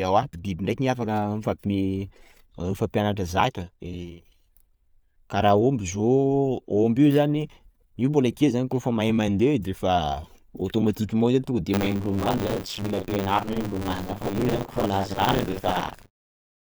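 From 11.73 s, just after "automatiquement io tonga de", buffer tearing sets in and lasts to the end. Writer and hardware pointers cross each 10 ms period, so roughly two-fifths of each buffer replays speech about 40 ms stale, causing a steady 100 Hz robotic rattle that persists through the closing fade-out.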